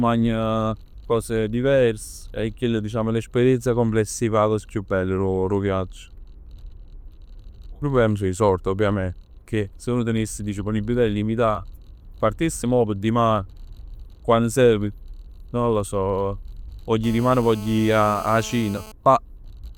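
At 17.04 s, right after "non lo so vogl", a GSM phone buzz sets in and holds until 18.92 s. A nearby 2G handset in a call was pulsing its transmitter about 217 times a second, and the audio circuitry rectified those radio bursts into sound. The result is a hard, raspy buzz at about 18 dB below the speech. It stays steady, and its rasp sets it apart from smoother 50 or 60 Hz mains hum.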